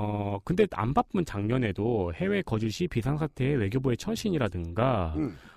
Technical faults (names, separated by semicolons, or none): overlap-add ripple